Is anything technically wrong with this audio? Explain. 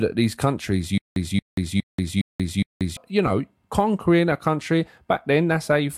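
Yes. From 0.98 to 2.97 s the speech has a stutter with silent gaps. A 228 ms fragment plays five times, each followed by 183 ms of dead silence, repeating every 412 ms. The likely cause is a stalled stream replaying its last buffer, so the speech for that stretch is lost.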